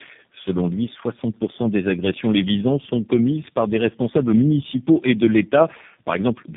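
Speech suffers tandem speech coding throughout: passing through roughly three low-rate speech codecs in a row has left it rough, muffled and warbly. A spectrogram shows nothing above about 3.8 kHz and smeared, blurry harmonics, since each coder re-encodes the previous one's errors.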